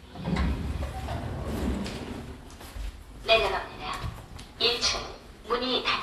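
From start to finish the sound is dull and smeared, with nothing above 12.4 kHz and a warbling, fizzy texture clinging to sustained parts. The likely cause is AAC compression: an AAC-LC encoder short of bits has dropped the highest band and quantised the rest coarsely against its hearing model, a degree of damage that points to a bitrate around 32 kbps.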